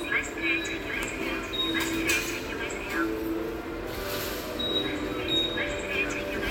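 Nothing here trips the ear: no technical faults turn up anywhere in this recording of sounds.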